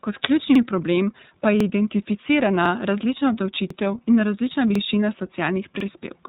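From the start the speech has the iLBC codec's narrowband sound. Nothing gets through above about 3.8 kHz, and the plainly audible roughness and slightly synthetic edge fit iLBC's 30 ms frame mode at around 13.33 kbps, where each frame's excitation is coded on its own.

On top of that there's a stutter from overlapping chunks at 0.55, 1.60, 2.65, 3.70, 4.75 and 5.80 s, once every second. Each new 1 s chunk starts 50 ms before the last one ended, so that slice plays twice: once just before "problem pa je", again just after "ključni problem pa je", and so on.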